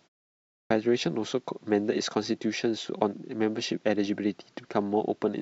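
A speech clip with a clipped start after a pause: after 0.55 s of silence, the sound enters abruptly at 0.55 s and its first 155 ms, through 0.71 s, are swallowed, likely because the output device slept during the pause and needed time to wake. Unlike muted pauses, which silence only the gap, this cuts into the sound itself.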